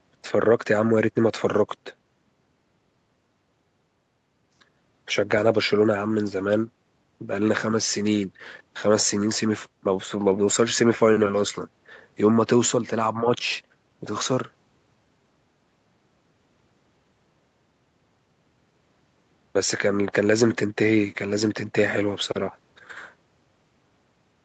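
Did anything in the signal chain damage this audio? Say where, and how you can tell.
No, nothing in the signal chain damaged this speech.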